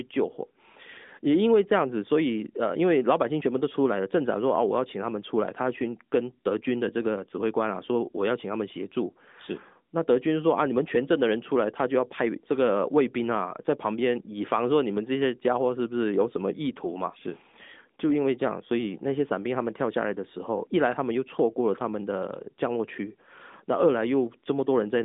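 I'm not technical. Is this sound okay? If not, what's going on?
Yes, nothing in this speech recording has gone wrong. It has the slightly narrow, muffled sound of an ordinary mobile phone call, because the AMR narrowband mobile codec carries only the range of a phone line and drops everything above about 3.8 kHz.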